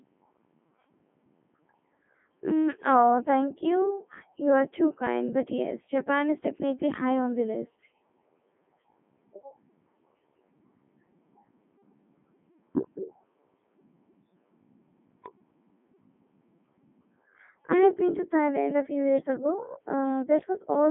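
Codec 2 vocoder damage runs through the whole clip. The speech has been reduced to pitch, voicing, energy and a coarse spectral envelope, then rebuilt from sine waves, so the original waveform is gone and what remains sounds robotic and buzzy. The damage is heavy, with a narrow line band of 200 Hz to 3.4 kHz, nothing above 3.6 kHz, and a sound that fits Codec 2's top 3.2 kbit/s mode.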